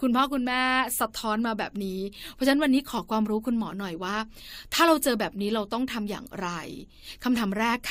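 A speech recording with no technical faults audible anywhere in the signal.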